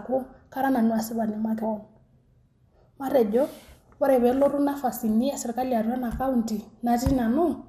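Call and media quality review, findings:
Whole clip: MP2 compression, likely a low-rate Layer II encode, consistent with roughly 80 kbps. Starved sub-bands switched off, nothing above 15.1 kHz; remaining bands coarsely quantised. Speech sounds dull, with plainly audible gurgling, granular distortion throughout.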